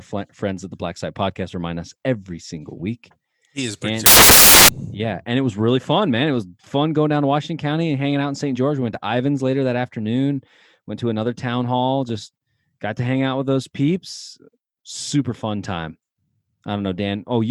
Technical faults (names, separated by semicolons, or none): samples built from the wrong bytes